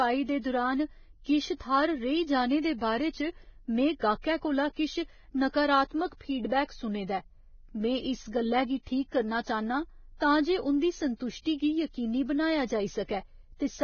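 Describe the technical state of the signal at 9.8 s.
At 9.8 s the speech is dull and grainy, as it is across the whole clip. Nothing sounds above 6.6 kHz. The remaining treble turns to hiss, and consonant attacks blur. The likely cause is heavy Vorbis compression at a very low bitrate.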